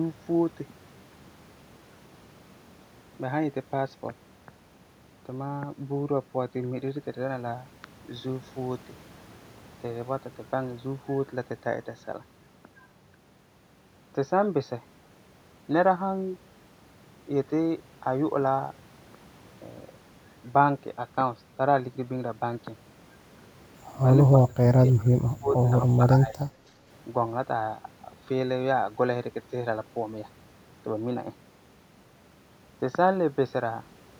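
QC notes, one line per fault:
24.47–25.73 s, speech suppressed in double talk: the speech level dips sharply, by up to roughly 30 dB, for around a second in total. This points to an echo canceller that likely could not separate near-end talk from its own loudspeaker echo while far-end audio was playing, and attenuated the near-end signal along with the echo.
25.97–26.50 s, speech suppressed in double talk: a shorter, shallower repeat, with a drop of about 20 dB and roughly 0.3 s affected, likely from the same suppressor clamping down again.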